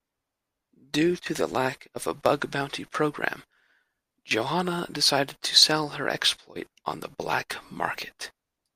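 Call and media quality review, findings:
No audible fault in the speech signal: level, continuity and timing hold steady throughout, with nothing to trace to any component.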